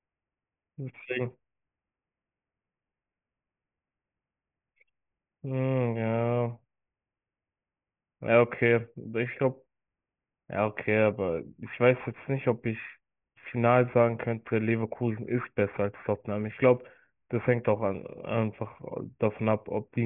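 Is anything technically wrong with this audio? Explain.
Yes. This speech has aliasing, and it runs through the whole clip. The audio was taken to a lower sample rate without a filter first removing the high content. Everything above 3 kHz folds back below that line, which fits a drop to a 6 kHz rate. The folded energy lands on unrelated frequencies, roughly 20 dB under the speech. Sibilants sound gritty and metallic, and the spectrum runs right up to 3 kHz.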